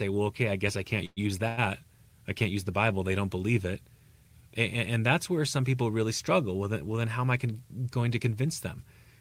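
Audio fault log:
1.05–1.22 s, call audio freeze: sound buzzes on and fades for about 0.11 s, then 10 ms silence, likely from packets held up; spectrogram shows smeared, fading bands before a gap.
1.48–1.59 s, short stall from a late packet: the last sound is stretched for 96 ms until the packet arrives; waveform shows a repeated, slightly dipping cycle, nothing lost.
7.05–7.47 s, jitter buffer speed-up: sound runs at 108% speed with pitch unchanged as about 40 ms of pitch periods are cut; waveform looks compressed in time.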